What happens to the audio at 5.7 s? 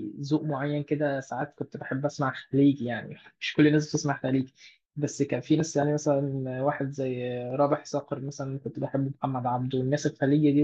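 Nothing goes wrong at 5.7 s: the speech carries on intact through that moment, with no dropout, click or distortion.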